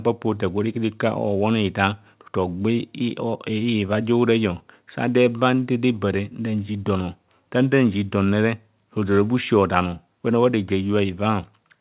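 No faults are audible; the speech arrives over a call path with nothing above 4 kHz, which fits a G.711 mu-law codec at 64 kbps.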